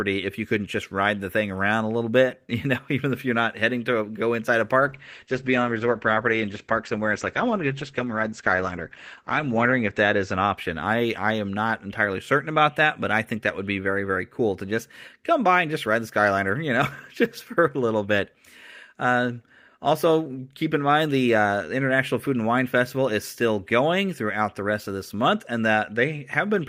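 From 4.82 s to 11.07 s, a call bitrate drop cuts the encoder from 32 kbps to 10 kbps, lowest for about 4.9 s. The speech turns coarse and muffled, and the spectrogram loses everything above 8 kHz (normally to 20 kHz) until the rate recovers.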